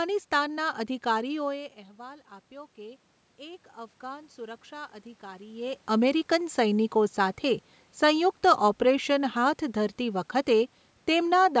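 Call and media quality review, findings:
Automatic gain rising, 1.5–5.9 s, call AGC. Input drops about 18 dB as talker moves back; gain climbs about 7 dB over four seconds, lifting voice and room noise together before "અમેરિકન સૈનિકો". Waveform: slow envelope ramp; spectrogram: noise floor brightening.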